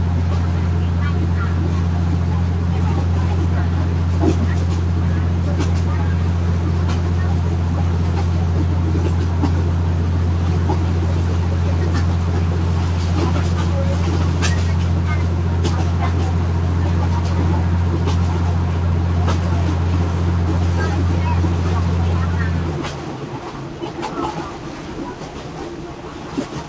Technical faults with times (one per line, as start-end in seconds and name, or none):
none